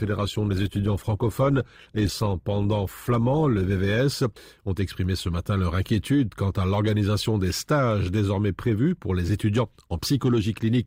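Adaptive stream starting at a low bitrate, from 0.0 to 4.0 s of this speech clip: for the first four seconds the treble is thin or synthetic and codec smearing is pronounced, which fits a low-rate Opus version of the stream at around 16 kbit/s. At 4.0 s the quality jumps up with no gap, pointing to a step up to roughly 64 kbit/s once the player had measured the connection and switched to a better version.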